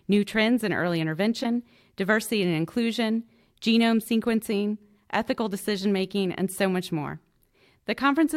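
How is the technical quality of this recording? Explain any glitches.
The speech recording has one glitch. Damaged data in a compressed stream occurs from 1.40 to 1.46 s, between "new trends in early" and "diversity and inclusion genome". Corrupted bytes there made the decoder misread frames and lose sync while it hunted for the next valid frame header. The result is a brief disruption of about 56 ms, of the kind heard as a chirp, click or short gap.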